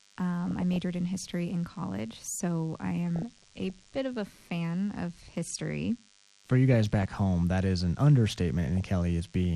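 A nearby DECT cordless phone's 10 ms radio bursts are being rectified in the audio path, leaving a thin, steady 100 Hz buzz about 35 dB below the speech throughout. The speech is dull, with a gurgling, granular texture, likely from MP2 compression at a low bitrate, around 80 kbps. Upper sub-bands drop out and the remaining bands are coarsely quantised. DAB burbling occurs at 0.48–0.76 s before "in history in college", at 3.16–3.96 s, at 4.95–5.35 s after "of a fan", at 6.74–7.18 s before "that is an", and at 8.77–8.89 s. Reception errors there corrupt the MP2 data, putting short blips of noise into single sub-bands.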